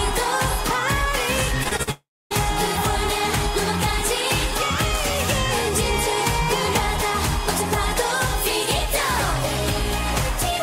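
From 1.63 to 1.89 s there is repeated packet loss with a robotic sound. Four short holes, the longest about 45 ms, are patched by stretching the preceding sound. Roughly 38% of this span is filler, giving a choppy stutter rather than one clean gap.

Right after, from 1.91 to 2.32 s, the sound smears into a fading buzz and then about 280 ms of silence before resuming, with the missing stretch never returning. This is likely a long network dropout. Unlike the stutter before it, it is one sustained loss.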